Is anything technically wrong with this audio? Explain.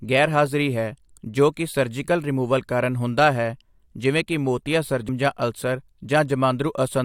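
Yes. At 5.08 s, just after "ਹੈ ਜਿਵੇਂ ਕਿ ਮੋਤੀਆ", the speech jumps abruptly forward with a brief blip. This is likely a stream segment skipped: one chunk of the stream failed to load, so playback continued from the next chunk and that stretch is missing.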